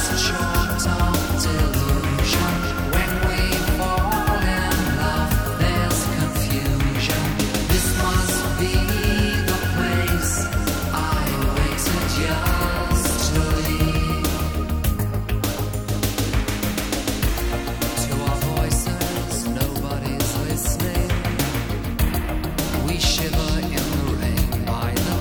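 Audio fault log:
No faults heard.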